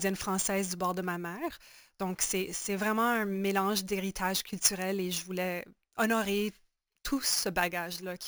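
Throughout, imaging from sample-and-hold upsampling adds a metallic fizz tracking the speech. It fits 16 kHz audio raised to 44.1 kHz unfiltered, mirroring into 8–16 kHz, about 11 dB down.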